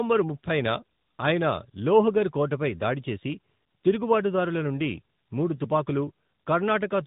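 From start to finish the speech carries tandem speech coding: it was coded by two speech codecs in a row, pointing to an ADPCM stage feeding an AMR-NB coder, so the second worked on the first's damage. It sounds rough, muffled and warbly; a spectrogram shows nothing above about 4 kHz and smeared, blotchy harmonics.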